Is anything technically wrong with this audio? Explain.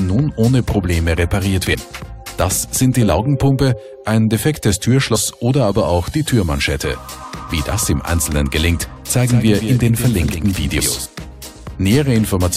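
Yes. There are two problems: skipped compressed frames and a doubled audio track.

Compressed frames skipped at 1.73–1.75 s, 5.14 s and 10.79–10.81 s: missing or rejected frames make the audio jump ahead roughly 150 ms, then 100 ms twice. The spacing fits 23.2 ms frames.

Doubled audio track from 9.21 to 11.06 s: a dry full-band copy trails by around 150 ms at about 10 dB down, starting and stopping abruptly, likely from a second, slower capture path.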